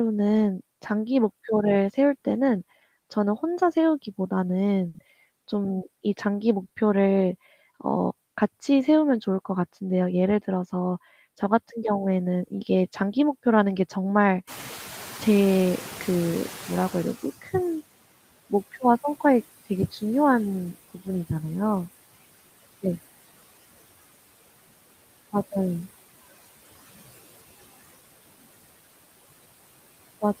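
Noise suppressor artifacts run through the whole clip: the background is pulled down by about 19 dB between phrases and swells back under the speech. On a spectrogram the noise floor looks patchy, with isolated flickering time-frequency specks.

At 4.88 s and 6.68 s come short stalls from a late packet. The jitter buffer ran dry and the last sound was stretched for 60 ms, then 20 ms, before playback resumed with nothing lost. Each is a briefly held sound, visible as smeared, repeated harmonics.

From 14.47 to 17.78 s the noise suppressor is catching up. Room noise jumps by about 18 dB near 14.5 s, and the suppressor's estimate lags, so the noise first comes through loud, then sinks over 3.3 s to about 17 dB of reduction. A spectrogram shows a bright noise band fading gradually.

Speech cut by the noise suppressor appears at 17.42, 19.91 and 20.94 s. Each time, around a tenth of a second of quiet speech was mistaken for noise and dropped by about 13, 11 and 16 dB. 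It sounds swallowed, and the waveform shows a sudden notch in the envelope.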